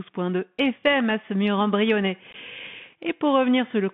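Narrowband, scratchy speech runs through the whole clip, confined to roughly 150 Hz to 3.5 kHz, with sibilants gritty and a granular hiss underneath. This is the Bluetooth CVSD headset codec, which encodes one bit per sample as an up-or-down step whose size adapts, fitting a 64 kbit/s headset link. From 2.31 to 2.35 s, just after "à semur mur brionnais", the speech breaks into brief abrupt holes, about 19 ms missing across 30 ms, the longest run 15 ms. This is unconcealed Bluetooth headset packet loss: a handful of short voice packets dropped and replaced with silence or an idle pattern rather than patched over.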